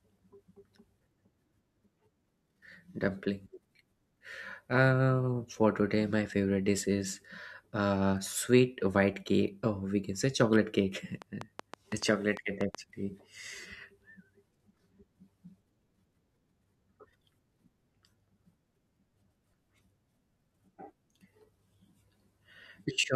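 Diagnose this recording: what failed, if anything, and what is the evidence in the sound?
A train of clicks runs from 11.22 s to 12.76 s: about ten sharp, similar pulses at an uneven pace averaging 5.9 per second, each one standing roughly 10 dB above the speech. They sit on top of the audio as a ticking overlay rather than replacing it. The irregular spacing and uniform pulse shape point to the analogue wiring or converter stage, likely interference from nearby equipment coupling into the line or a struggling interface injecting transients.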